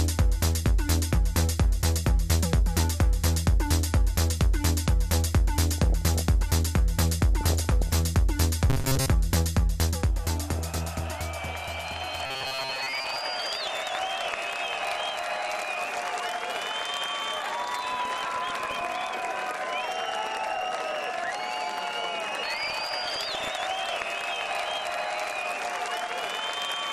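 The whole clip sounds dull and granular, with a gurgly edge and upper bands flickering in and out. That's plainly audible MP2 compression, likely from Layer II running short of bits at a low rate, something around 80 kbps, so sub-bands get dropped and coarsely quantised. On top of that there's DAB burbling, short bursts of noisy blips in single sub-bands, at 5.70–6.21 s, 7.41–7.92 s, 10.50–11.04 s, 17.83–18.81 s and 22.58–23.48 s. Those come from bit errors getting past the error correction, at a fraction of a percent, which throws single sub-band levels around frame by frame. Then at 8.70–9.09 s and 12.26–13.16 s the sound goes rigid and metallic with a steady 133 Hz buzz. That's robotic sound from repeated short buffers, likely a roughly 7.5 ms chunk being looped to cover late audio, with most of the real material in those stretches skipped.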